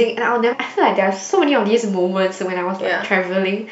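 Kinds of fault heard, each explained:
Damaged data in a compressed stream: corrupted bytes throw the decoder off sync, causing a brief glitch at 0.51–0.54 s, a visible break in the spectrogram and waveform.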